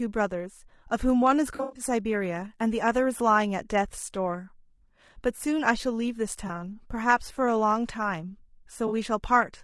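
Right from the start the speech has a rough, grainy edge, with noise sitting between the harmonics and a top end that sounds thin and a bit synthetic. That's likely low-delay AAC compression (AAC-ELD), whose short frames resolve pitch poorly, and the damage suggests a low bitrate, somewhere around 32 kbps.

From 1.55 to 1.83 s there's a smeared, phasey patch where AAC frame loss with concealment kicks in. About 160 ms went missing across roughly 200 ms, the longest gap about a tenth of a second, and the decoder papered over it by reusing the last good spectrum. Shorter dropouts of the same kind hit at 6.47 to 6.50 s (20 ms) and 8.87 to 8.92 s (40 ms), each a brief noisy blur.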